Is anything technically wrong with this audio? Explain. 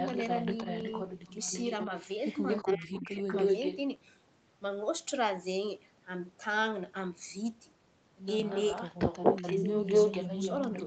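Yes. The clip has two kinds of fault, both tied to a speakerphone echo canceller in a call.

Echo leak occurs at 0.0–1.87 s, 2.2–2.78 s, 2.94–3.06 s, 3.27–3.77 s and 8.49–10.86 s. A delayed copy of the speech trails the original. In the first stretch the copy lags by 342 ms at about 5 dB below the speech. In all later stretches it lags by 231 ms. At 2.2 s it is about level with the speech, at 2.94 s it is faint at about 15 dB down, and from 3.27 s and again from 8.49 s it is about 5 dB louder than the speech. This is likely residual loudspeaker pickup that the canceller failed to subtract and sent back.

Speech suppressed in double talk runs from 2.64 to 3.23 s, overlapping the echo bursts. Over roughly half a second the speech dips, falling by around 25 dB at its deepest. This is likely the canceller's suppressor misreading simultaneous talk as echo and attenuating the near-end talker along with it. 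The result is a ducked passage.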